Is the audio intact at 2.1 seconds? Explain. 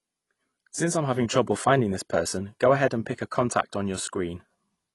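No. AAC compression runs throughout, nothing above 11.5 kHz. The dull, smeared sound points to likely low-bitrate coding, which fits about 32 kbps.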